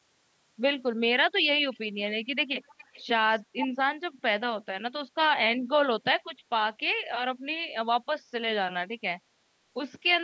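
From 1.07 to 1.44 s the speech dips sharply, by about 40 dB at its deepest. This is speech suppressed in double talk, likely an echo canceller turning down this side's voice along with the loudspeaker echo while the other party spoke. On a waveform the envelope collapses; a spectrogram shows the harmonics thinning and vanishing.

A faint delayed copy of the speech, lagging by 313 ms, appears at 1.72 to 1.79 s, grows clearer at 2.66 to 3.03 s, and is nearly as loud as the original at 3.57 to 3.68 s. This is echo leak, likely from a loudspeaker side whose canceller let residue through. A spectrogram shows ghost harmonic traces offset in time.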